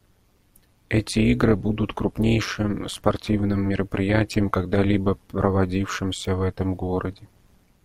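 Overlap-add ripple runs through the whole speech clip. The audio was split into windowed frames and rejoined with overlaps that do not sum evenly. Level swings by about 11 dB once per frame, around 200 times a second. It sounds like a metallic buzz with extra tones around each note.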